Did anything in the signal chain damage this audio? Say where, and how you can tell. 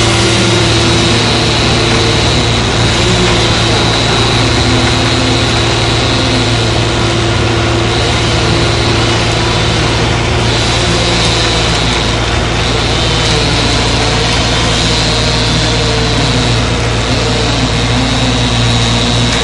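No, I hear no damage from the signal chain here.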